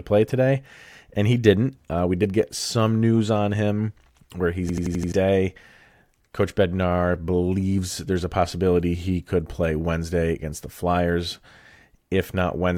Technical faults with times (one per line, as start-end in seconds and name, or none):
4.69-5.12 system hang loop